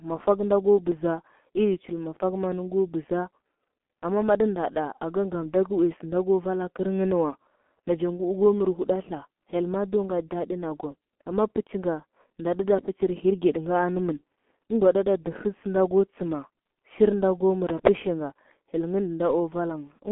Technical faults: G.723.1 codec

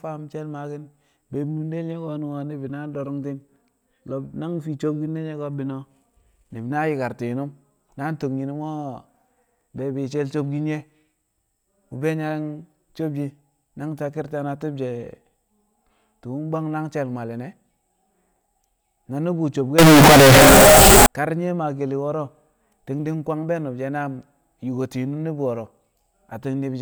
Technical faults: float read as integer

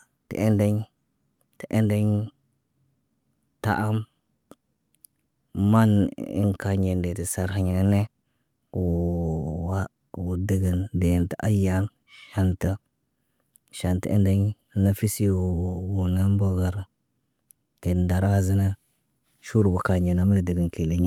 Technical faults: none

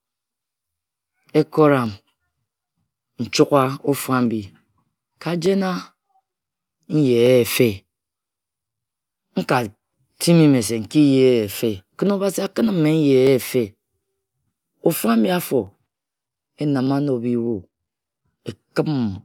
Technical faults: clock drift buffer slips

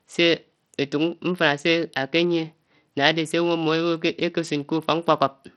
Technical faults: Bluetooth SBC compression

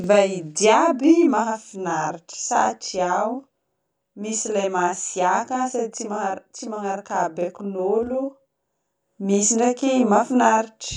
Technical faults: channel delay (doubling)

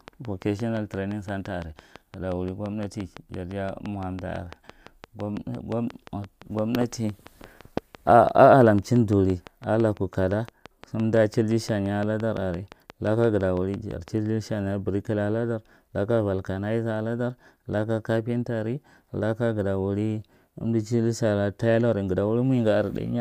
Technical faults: train of clicks

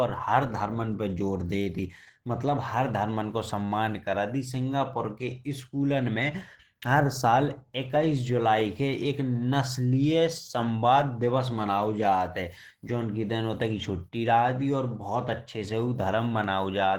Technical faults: Opus compression

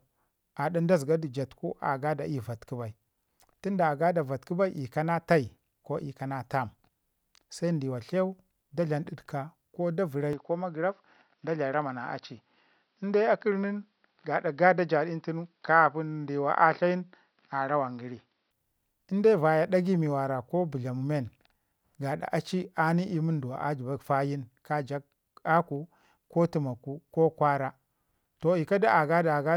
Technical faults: input switched to a poorer device

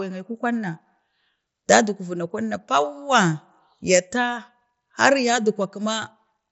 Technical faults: none

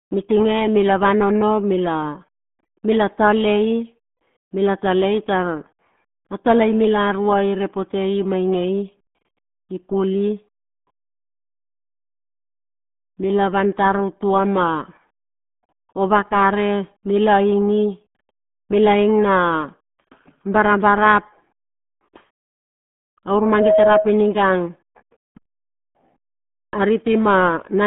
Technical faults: RealAudio 14.4 codec

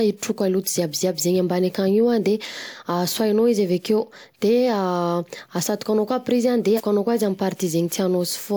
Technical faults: compressed frames skipped

